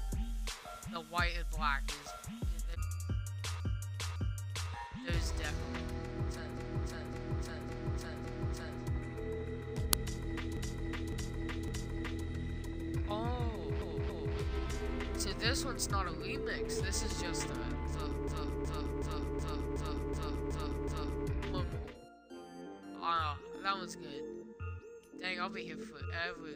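Repeated frames start at 3.60 s. Runs of compressed frames were delivered more than once, so the decoder replays the same 0.56 s block twice more, and the sound stutters back on itself. At 6.57 s, that 0.56 s block loops four extra times. At 9.93 s, an uninitialised buffer was played before any audio was written into it, so stale memory came out as samples. It is heard as a sudden loud crack lasting about 1.5 ms, which fits a 64-sample buffer. The repeated frames then return at 10.57 s, where a 0.56 s block plays three extra times. At 13.82 s, a 0.28 s block repeats twice more. From 18.28 s, a 0.37 s block cycles eight extra times, the longest stutter, adding about 3 s.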